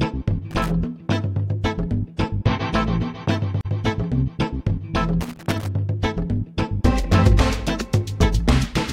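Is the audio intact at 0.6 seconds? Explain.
No. Loose connector crackle runs from 0.51 to 0.70 s: a worn contact briefly makes and breaks, chopping the signal into an irregular, scratchy burst.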